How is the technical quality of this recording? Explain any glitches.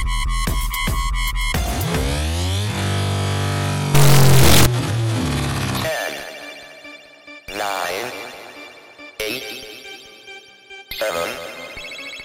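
The recording has one serious glitch. An integer read as float fault runs from 3.95 to 4.66 s. Integer samples decoded as floating-point values, consistent with 32-bit integer data taken as 32-bit float, swing between near-zero and the clipping limit, giving an extremely loud, harsh buzzing square wave.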